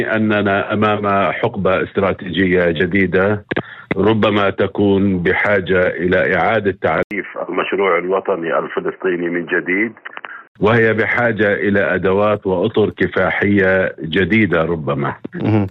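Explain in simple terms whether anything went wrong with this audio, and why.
Something went wrong between 7.03 and 10.55 seconds. The sound goes dull and boxy, losing everything above 3 kHz, with faint new background noise. A brief 80 ms gap opens at the change. The likely cause is an input switched to a poorer device.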